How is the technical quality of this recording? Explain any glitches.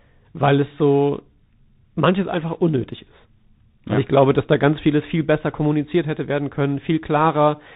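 The technical quality is poor, with codec damage plainly audible from start to finish. Bluetooth CVSD headset codec, throughout: each sample is coded as a single up-or-down bit whose step size adapts, which fits a 64 kbps link. Everything above 4 kHz is gone, so the speech sounds muffled and narrow. Loud high sounds overrun the step and distort, s sounds turn scratchy, and a granular hiss sits beneath the voice.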